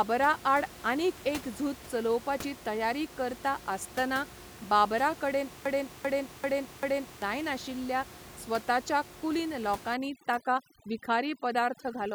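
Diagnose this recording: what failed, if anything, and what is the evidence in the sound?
Broken-record loop from 5.66 to 7.22 s, after "तयारी करता आसतना बाबराकडेन". A 0.39 s fragment repeats four times back to back. A stalled playback buffer is the likely cause. The audio for that span is lost.

Overdone noise removal in call processing, from 9.94 s to the end, after "जायनाशिल्ल्या स्वताच्या कुलीन". Bands near the noise estimate are cut away. The background becomes twinkling near-silence.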